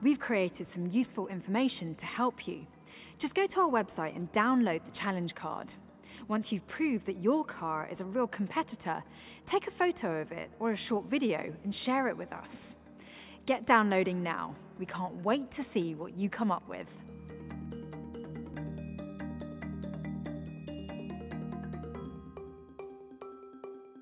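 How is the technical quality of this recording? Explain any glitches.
The recording shows no technical glitches, with the signal holding steady and intact over its whole duration.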